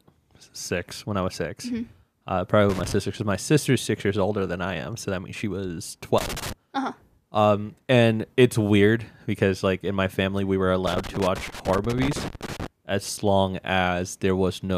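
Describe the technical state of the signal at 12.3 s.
At 12.3 s the speech sits inside a loose connector crackle, running from 10.87 to 12.67 s. A worn contact makes and breaks, chopping the signal into irregular scratchy bursts.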